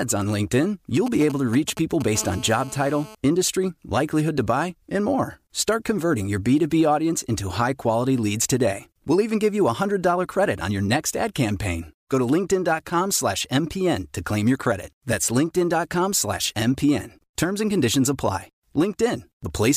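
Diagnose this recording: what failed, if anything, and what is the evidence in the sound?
GSM signalling bursts were picked up in the analogue wiring from 1.06 to 2.17 s, a galloping dit-dit pattern of brief 217 Hz buzzes roughly 10 dB below the speech. A nearby 2G phone's short radio bursts are rectified by the audio circuit. On a waveform, they appear as clustered spiky packets.

GSM phone buzz follows from 2.18 to 3.15 s, just before "industry likelihood to buy", as a hard, raspy 217 Hz buzz about 18 dB below the speech, now steady as in a call. The phone's continuous 217-per-second transmit bursts are rectified into audio, drawing evenly spaced harmonic lines up the spectrogram.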